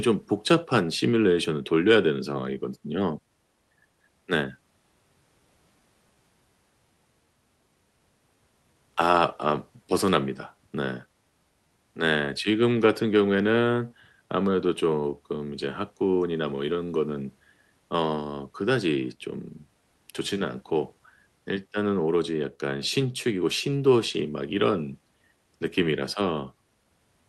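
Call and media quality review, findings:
Clock drift between sender and receiver: sender clock about 3% slow, jitter buffer draining; receiver stretches audio, irregular small hiccups throughout the speech.

Repeated timing corrections, 0.52–27.22 s: jitter buffer repeats short pieces, playback at 97% speed, adding under a second overall; Opus audio band-limited near 12 kHz.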